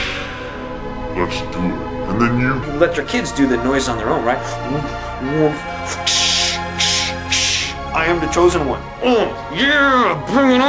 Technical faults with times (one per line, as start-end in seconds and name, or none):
0.00-2.63 wrong sample rate